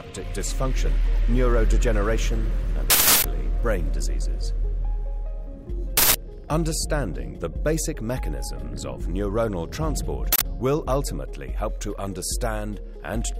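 Three bursts of uninitialised buffer noise land at 2.90 s, 5.97 s and 10.33 s, lasting about 0.34 s, 0.17 s and 0.09 s. Each time a block went to the output before any audio had been written into it, so whatever junk sat in memory got played as samples. You hear a sudden, loud blast of harsh digital noise. The lengths halve each time, which fits blocks of 16384, 8192 and 4096 samples.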